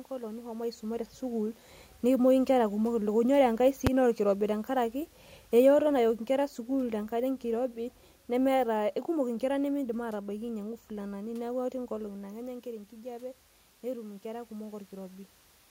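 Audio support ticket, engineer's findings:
Single full-scale bang at 3.87 s, about 5.8 ms, which fits a 256-sample block. Invalid numbers at full scale, where infinite or invalid values were clamped to maximum. A block this short gives one bang, not a loud pop at the start and end.

Level swell from 10.24 to 15.2 s, about 6 dB. Automatic gain rising: the AGC judged the input too quiet and raised its gain slowly. Room noise swells with the voice, unlike the talker movement near 12 s.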